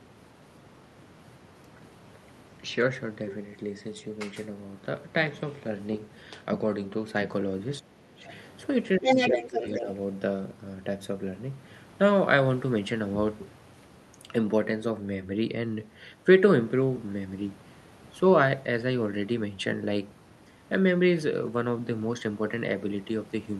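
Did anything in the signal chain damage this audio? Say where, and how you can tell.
Yes. The damage sits in call processing, in the echo canceller. The speech dips in short bursts at 7.8 to 8.0 s, 8.16 to 8.24 s, 8.98 to 9.09 s, 9.31 to 9.58 s and 9.81 to 9.87 s. Each time, the level falls by roughly 5 to 10 dB, and by as much as about 15 dB near 9.0 s. This is speech suppressed in double talk. The canceller likely heard both parties at once and turned the near talker down along with the echo.

Overlapping those dips, from 9.04 to 9.83 s, a second voice comes through at roughly the same loudness as the talker. That is the other side's voice leaking through. The far end, played on the talker's loudspeaker, was picked up again by the microphone and likely not fully removed by the echo canceller. Its timing lines up with the suppression around 9 to 9.9 s. The canceller was struggling with both tasks at once there.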